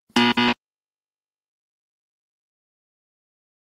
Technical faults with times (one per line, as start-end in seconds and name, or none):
0.49-3.74 call bitrate drop